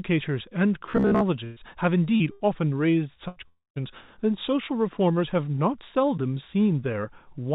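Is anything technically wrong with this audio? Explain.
Yes, there's a cluster of network-type damage in this speech clip, all in the first four seconds, on top of a narrowband call path where nothing above 4 kHz comes through, which fits G.711 mu-law at 64 kbps.

From 0.86 to 1.24 s there's robotic sound from repeated short buffers. It's a stiff, metallic buzz at about 67 Hz that still loosely tracks the speech. The likely cause is audio arriving too slowly, so the playout keeps looping roughly 15 ms chunks. About half of what you hear there is repeats rather than fresh audio.

There are three bursts of packet loss: 1.44 to 1.59 s, 2.32 to 2.43 s, and 3.28 to 3.39 s. The first covers about 120 ms and the other two about 80 ms each. In each one the receiver stretches the last sound into a fading buzz or hiss, then jumps ahead with that chunk of speech gone.

At 2.16 to 2.23 s there's a short concealed packet loss of about 40 ms. 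The gap gets patched by extending the previous sound and blending back in, so it comes across as a quick smear or wobble, and a brief consonant could easily disappear.

From 3.48 to 3.79 s there's a long network dropout of about 280 ms. The likely cause is nothing arriving for that stretch. It starts as a fading continuation, then the last 160 ms or so goes fully silent before speech resumes with that part missing.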